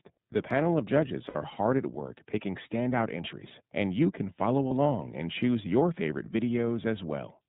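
A speech recording carried through the iLBC codec from start to finish. Nothing above 4 kHz survives, so the voice is narrowband, and the damage is plainly audible as a slightly rough, synthetic edge on the voice. That roughness, rather than the muffled smoothness of simple band-limiting, is what points to a frame-based speech codec of this kind, at a rate that fits iLBC's 13.33 kbps mode with 30 ms frames. At 1.28 to 1.36 s and again at 4.68 to 4.71 s there are lost iLBC frames, gaps of about 60 ms and 30 ms that fit two frames and one frame. In each gap the decoder fills in by repeating the last pitch cycle mixed with noise, so the audio turns into a brief held, buzzy vowel. It is not a silent dropout or a stutter. Because each iLBC frame is decoded on its own, the voice comes back clean almost straight after each gap. Codecs that depend on earlier frames instead leave a smeared recovery tail.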